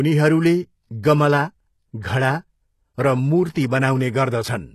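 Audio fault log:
throughout, HE-AAC compression. Nothing sounds above 12.3 kHz, and s sounds turn plainly gritty and metallic. The treble is likely rebuilt from copied lower bands, fitting about 16 kbps.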